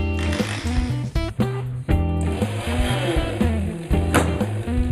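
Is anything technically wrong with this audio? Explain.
Yes. From 1.30 s to the end there is channel delay (comb filtering). One channel arrives late by only a few samples, roughly a tenth of a millisecond, and when the two channels are summed to mono, content shared by both cancels at evenly spaced frequencies. With such a short offset the first notch falls near 5 kHz, so the upper range turns dull and hollow, with a fixed, phasey coloration that doesn't shift over time.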